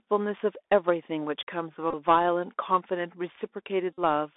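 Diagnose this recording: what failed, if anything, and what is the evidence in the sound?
The codec stage failed: the headset link ran the Bluetooth CVSD headset codec at 64 kbit/s, coding one bit per sample that only says up or down, with an adapting step size. Throughout the speech, the band is confined to roughly 300 Hz to 3.6 kHz, and the codec damage is plainly audible. A granular hiss sits under everything, s sounds come out scratchy, and loud high-frequency energy distorts where it outruns the step size.

The radio link between headset and phone dropped voice packets, and the Bluetooth headset packet repeated each time, because the chip decoded the previous packet's bits again. From 1.91 to 1.94 s, about 26 ms is replaced, scattered across 30 ms, with the longest run roughly 20 ms, which fits about seven lost packets. From 3.94 to 3.99 s, 45 ms is replaced, which fits about twelve packets. 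The repeats every 3.75 ms produce a short buzz near 267 Hz in both stretches.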